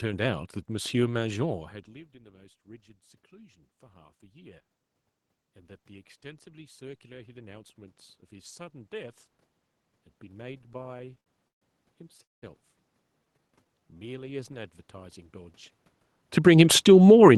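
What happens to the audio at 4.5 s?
Nothing goes wrong at 4.5 s; the speech there comes through intact, with no dropout, glitch or other fault at that moment.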